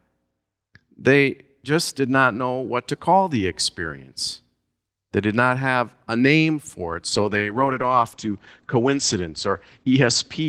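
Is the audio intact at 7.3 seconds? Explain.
No, a call bitrate drop runs from 7.12 s, just after "a name for it", to the end: the encoder falls from 32 to 11 kbps, so the audio turns coarse and muffled, with nothing left above 8 kHz.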